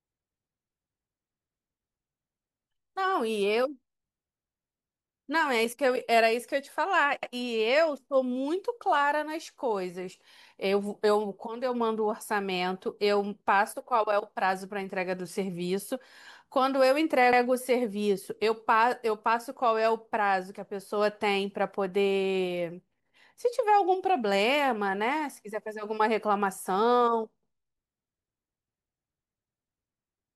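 The speech was handled in 10-second chunks that overlap, so each new chunk begins 100 ms before the previous one ends. At 7.23, 17.33 and 27.43 s that 100 ms plays twice, heard as a brief stutter repeating every ten seconds.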